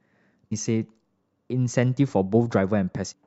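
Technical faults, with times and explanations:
0.51 s and 3.11–3.14 s, damaged data in a compressed stream: short glitches break into the speech where corrupted frames threw the decoder out of sync until it found the next frame header.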